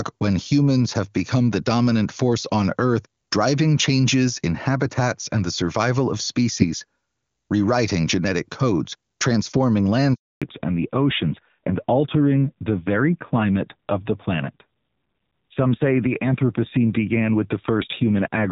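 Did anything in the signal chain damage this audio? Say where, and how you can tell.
Yes, at the network stage. Right after "rewriting genetic codes transforming", the speech cuts out at 10.14 s and stays silent until 10.42 s, a 280 ms hole. The sound dies away quickly. This is a handover gap: the call moved between networks, no speech frames arrived during the switch, and whatever was said in that interval is simply gone.

The second fault is in the codec. From 10.42 s to the end, the call falls back to narrowband. Before the gap the AMR wideband (HD Voice) stream has full bandwidth up to about 7 kHz, with faint or no coding damage, consistent with a high rate around 23.85 kbit/s. After the gap nothing remains above 4 kHz, so sibilants lose their edge and the sound turns dull and rougher. That fits the call renegotiating down to AMR narrowband at roughly 7.4 kbit/s after the handover.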